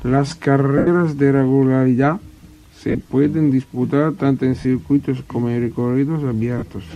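A speech clip with lost LE Audio frames: brief dropouts at 0.78 s (about 90 ms), 2.89 to 3.09 s (scattered losses, longest run around 40 ms), 4.60 s (45 ms) and 6.58 s (under 40 ms). In each gap the decoder replays the last spectrum with random signs, so the voice turns into a short noisy smear.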